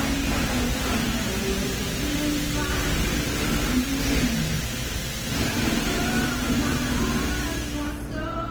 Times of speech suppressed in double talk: none

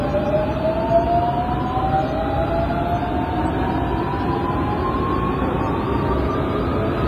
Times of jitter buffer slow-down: none

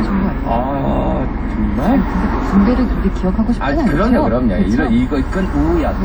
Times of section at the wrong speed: none

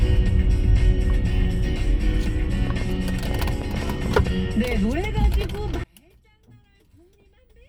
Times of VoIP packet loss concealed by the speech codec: none

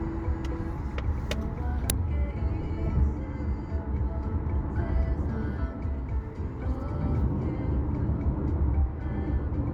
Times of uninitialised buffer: 1.90

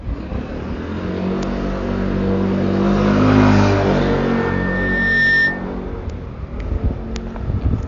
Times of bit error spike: 1.43, 6.10, 7.16

